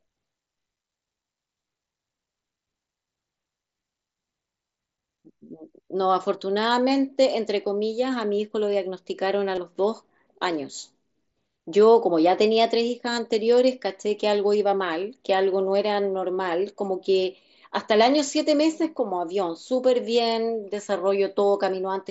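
At 9.55 to 9.58 s and again at 17.40 s, concealed Bluetooth headset packet loss briefly replaces the speech. About 22.5 ms and then 15 ms of audio never reached the phone, which fits three and then two lost mSBC frames. The receiver filled each gap by repeating a matching stretch of the preceding waveform. Unlike a plain dropout, there is no silence or click. The level holds, leaving only a short buzzy smear and a slight warble as real speech resumes.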